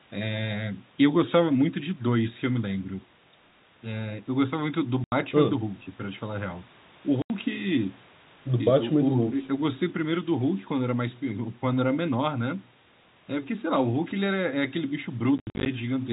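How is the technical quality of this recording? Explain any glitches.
The recording has audible dropouts from packet loss filled with silence. They occur at 5.04 to 5.12 s and 7.22 to 7.30 s, each an 80 ms hole, which fits runs of lost 10 ms packets. Between 15.38 and 15.66 s, about 180 ms goes missing in scattered gaps, the longest 70 ms. The receiver inserts pure silence, so speech cuts off abruptly with hard edges. The telephone-band G.711 sound, limited below 4 kHz, is heard throughout.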